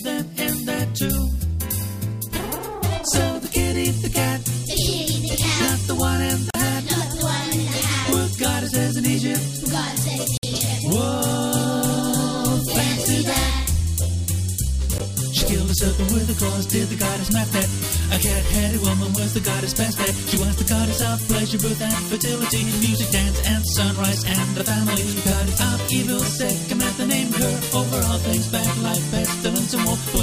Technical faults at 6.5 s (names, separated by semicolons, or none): Bluetooth stall